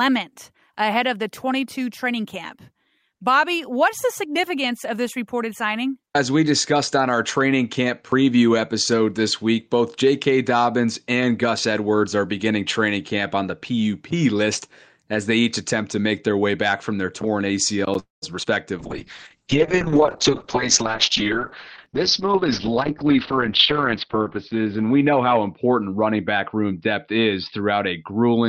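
After "back from their torn", a call audio freeze runs from 17.99 to 18.24 s. The sound trails off and then goes silent for about 150 ms before resuming intact, likely from packets delayed long enough to drain the jitter buffer.

A short concealed packet loss at 18.44 to 18.47 s leaves a brief smear where about 20 ms of audio was lost and patched by extrapolation.

From 18.80 s to the end, a call bitrate drop takes the encoder from 40 to 6 kbps and cuts the bandwidth from 20 kHz to 6 kHz. The audio sounds muffled and coarse, worst for a stretch of about 4.8 s.

Two jitter buffer speed-ups follow, at 20.29 to 21.41 s (107%, roughly a tenth of a second removed) and 21.88 to 23.48 s (108%, roughly 0.15 s removed). Trimming pitch periods to shed the backlog makes the speech run hurried at unchanged pitch.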